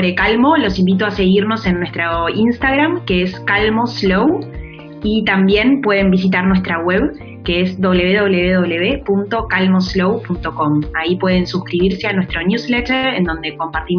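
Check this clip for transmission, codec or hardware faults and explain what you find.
No transmission, codec or hardware fault can be heard anywhere in the clip, and the signal holds steady in continuity throughout.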